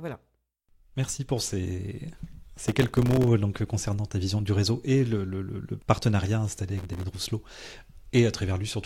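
Speech recording with two bursts of processor overload crackle, from 2.65 to 3.27 s, between "pour ces" and "concernant ta vision du", and from 6.77 to 7.03 s, right after "le le partenariat installé". In each burst, dozens of very short buffers, roughly a millisecond and a half each, were missed in quick succession and dropped to silence. Those hard-edged gaps sound like gritty tearing over the voice and stop once the load clears.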